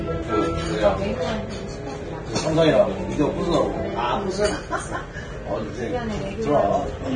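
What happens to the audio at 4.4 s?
At 4.4 s, as throughout, the treble is gone above 9.7 kHz and what remains is grainy, hissy noise, likely from heavy Vorbis compression at a low bitrate rather than simple filtering.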